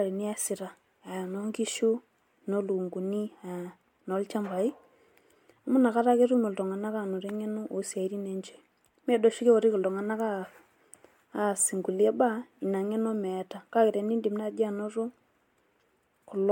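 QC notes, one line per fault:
throughout, generation loss: The speech was likely decoded and re-encoded with a lossy codec about four times, and the artefacts fit MP3 at around 96 kbit/s. Each new pass quantised the already damaged signal on a shifted frame grid, so noise and missing spectral bands stacked up instead of repeating the same errors. The result is a swirly, hollow, smeared texture heavier than a single encode at that rate would give, with consonant attacks blurred.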